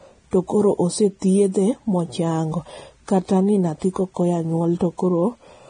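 Right from the start and all the way through, the speech carries heavy Vorbis compression damage. Nothing gets past about 9.7 kHz, so the top end is simply gone, and the treble that remains below that is quantised so coarsely that fine detail turns into a hissy, grainy wash. Consonant attacks come out smeared and voiced tones sound roughened. The likely cause is Vorbis encoding at a low quality setting, which fits a bitrate in the low twenties of kbps.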